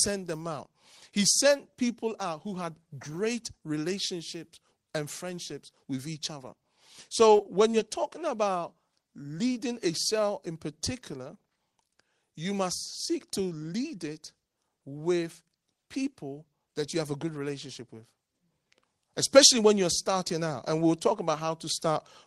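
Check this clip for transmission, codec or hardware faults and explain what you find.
There is one kind of fault here, heard three times. At 7.37 to 7.41 s and 7.43 to 7.47 s, just before "when you're talking about", and at 7.71 to 7.75 s, before "you're talking about leading", brief smears are short concealed packet loss. Each time about 20 ms of audio arrived too late, and the receiver bridged the gap by extending the preceding sound.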